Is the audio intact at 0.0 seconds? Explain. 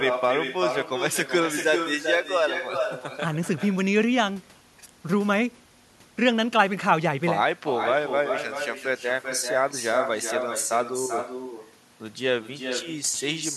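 No. At 0.0 seconds the speech already carries an echo with no canceller, and it lasts through the whole clip. The far end plays the call over a loudspeaker. Its microphone picks that sound up again. Nothing removes it before it returns. So each phrase comes back roughly 400 ms later, about 6 dB quieter. The echo sounds thinner than the direct speech. It trails every utterance like a shadow.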